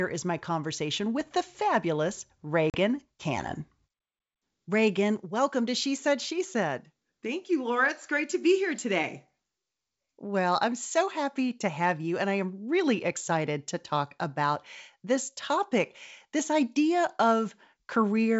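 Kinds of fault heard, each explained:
Packet loss on an ADPCM call: just after "conversation with the fabulous", at 2.70 s, the speech cuts to a hard-edged silent hole of about 40 ms, roughly two packets, before resuming at 2.77 s. The receiving decoder's adaptive predictor and step size have fallen out of step with the sender's, so the speech returns briefly mismatched before resettling. Unlike a simple dropout, the disturbance spills past the gap's trailing edge.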